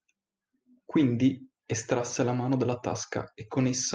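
A short speech recording with no technical fault to report. Nothing wrong can be heard anywhere in it, so there are no times or causes to give.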